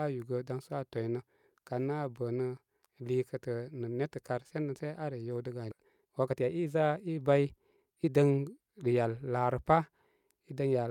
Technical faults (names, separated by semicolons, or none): skip ahead; jitter buffer speed-up